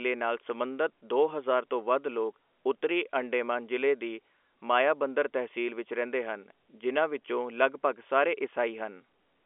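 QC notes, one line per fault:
0.50 s, dropped samples: the stream likely lost a fraction of a millisecond of samples, so the waveform jumps abruptly and produces a single sharp click.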